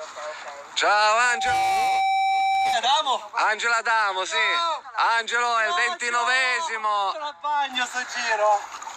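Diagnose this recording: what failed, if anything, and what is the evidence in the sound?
A loudspeaker feedback squeal appears in the acoustic loop between playback and capture. From 1.18 s a steady tone near 773 Hz swells over roughly 0.4 s until it is about as loud as the sound itself, then holds until 2.85 s. The microphone was hearing its own loudspeaker, and at that one frequency the loop gain passed unity. Unlike interference or hum, it grows out of nothing and stops when the loop breaks.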